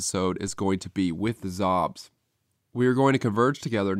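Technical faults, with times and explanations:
0.48 s, DC step: the waveform's zero line jumps suddenly by a level of about -37 dBFS, heard as a brief low thump while the speech carries on unchanged. The offset then drains away slowly, as a roughly 2 Hz high-pass in the chain pulls the baseline back toward zero.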